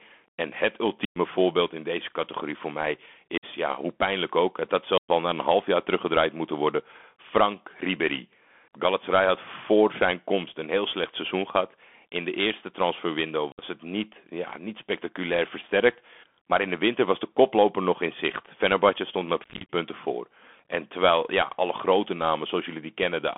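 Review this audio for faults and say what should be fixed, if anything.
Bluetooth CVSD headset codec, throughout: the speech sits in a 250 Hz to 3.4 kHz band, with scratchy s sounds where loud high sounds outrun the one-bit step, and a granular hiss under the speech, which fits a 64 kbps CVSD link. The hiss and slope-overload grit set it apart from a plain telephone band-limit. Routing the call over a wideband headset profile such as mSBC would prevent it.

Unconcealed Bluetooth headset packet loss occurs at 1.05 to 1.18 s (105 ms), 3.38 to 3.45 s (about 50 ms), 4.98 to 5.10 s (about 110 ms), and 13.52 to 13.63 s (60 ms). From 19.44 to 19.69 s the losses are scattered, with runs up to 30 ms. Lost packets become hard-edged holes, and the speech returns briefly quieter, unlike smooth noise-gate dropouts. Keeping the headset close to the phone, away from 2.4 GHz interference, would prevent it.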